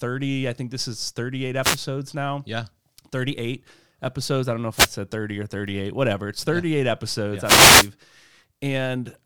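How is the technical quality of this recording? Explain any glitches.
The recording has three wireless microphone noise hits. From 1.62 to 1.78 s, just before "now yeah", a brief swish of static is heard. At 4.74 to 4.89 s, right after "episodes i don't know", a second short burst follows. From 7.43 to 7.90 s, after "yeah episodes", the longest hit lasts about half a second. Each is the analogue FM radio link fading as reflected signals cancel, letting receiver hiss rise. Unlike a digital dropout, the sound doesn't go silent; it fills with rushing noise.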